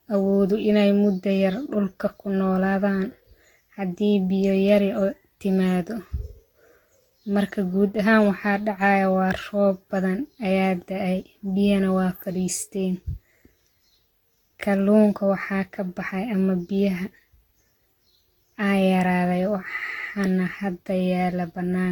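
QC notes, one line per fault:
throughout, generation loss: swirly, hollow, smeared sound with blurred attacks, likely from about seven lossy re-encodes; spectrogram shows patchy holes, empty above 19.3 kHz.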